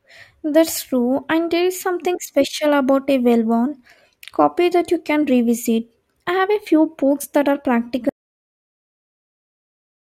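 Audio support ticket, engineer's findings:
Audio dropout to silence from 8.09 s to end of clip, directly after "few books that are". Speech cut mid-phrase, then silence, no room tone. Likely input loss (device disconnect, link failure or mute) with recorder still writing. Remaining content unrecoverable.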